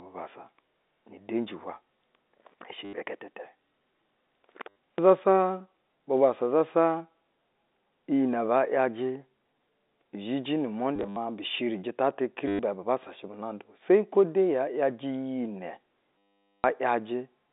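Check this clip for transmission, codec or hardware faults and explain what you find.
Packet loss with last packet repeated occurs at 2.85–2.93, 4.69–4.75, 10.96–11.16 (scattered, longest run 70 ms), 12.48–12.59 and 16.19–16.64 s. The receiver replays stale 10 ms packets, heard as a robotic 100 Hz stutter; spectrograms show repeating waveform blocks within the 250 Hz–3.7 kHz telephone band.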